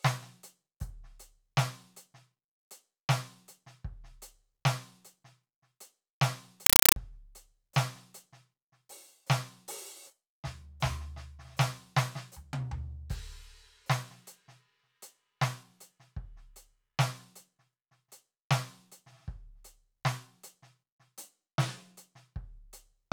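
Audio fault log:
6.66–6.96 s, compressed stream played as audio: undecoded Dolby Digital data reproduced as samples gives loud chattering static, 5.33 ms noise bursts repeating 31.25 times a second.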